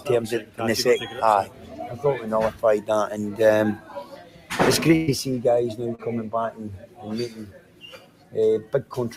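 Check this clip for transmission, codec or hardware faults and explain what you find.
Three problems show up: a speech-tuned noise suppressor working on non-speech material, one burst of lost packets, and one brief concealed dropout.

A noise suppressor applied to music or sounds stays active throughout, treating steady content as noise and pulling it down by around 10 dB, so held parts pump and thin.

Sound cut by the noise suppressor occurs at 0.41–0.6 s, 1.45–1.97 s, 3.76–4.5 s, 6.81–7.04 s, 7.29–8.35 s and 8.65–8.91 s. Sustained material sinks by about 8 to 9 dB, and tails are cut short.

A burst of packet loss at 4.95–5.10 s removes about 120 ms. The receiver extends the last sound, fading it, then jumps ahead with that stretch gone.

A short concealed packet loss at 5.95–6.01 s drops about 40 ms, bridged by synthesized continuation that blends back in, heard as a brief smear or wobble.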